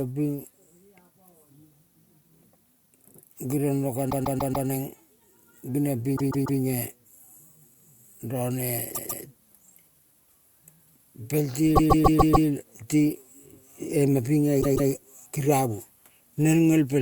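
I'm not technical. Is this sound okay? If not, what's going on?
No. The speech stutters five times, replaying the same short snatch of about 0.14 s over and over, at 4.09–4.67 s, 6.16–6.59 s, 8.94–9.23 s, 11.75–12.47 s and 14.61–14.89 s. These are repeated frames: a piece of the compressed file was stored or sent more than once.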